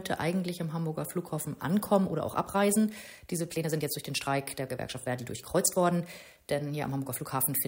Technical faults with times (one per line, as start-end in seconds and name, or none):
1.94-7.67 time-stretched section